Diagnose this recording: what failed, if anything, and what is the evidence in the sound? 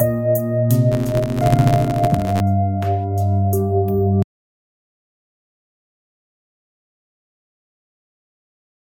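Between 0.92 and 2.42 s the music carries a buzz at about 93.8 Hz, the signature of a filter restarted on every block. It fits a 512-sample processing buffer: each block starts from zero state and leaves a tick. The waveform shows evenly spaced spikes scaling with level, and the spectrogram shows vertical striations.

From 4.22 s to the end, the music cuts to an audio dropout to silence. The gap holds silence with no room tone, a flat line on the waveform and a blank spectrogram. The likely cause is a lost input at the wiring or converter stage while recording continued.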